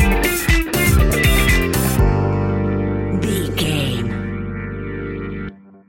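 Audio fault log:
1.10 s and 3.64 s, chunks out of order: at each point a short block of about 5.8 ms plays late, after blocks that should follow it. It is one block late at 1.10 s and two blocks late at 3.64 s. This gives a brief jumbled flick with three hard joins. Unlike a dropout, no audio goes missing, and unlike a repeat, nothing plays twice. Only the order is scrambled.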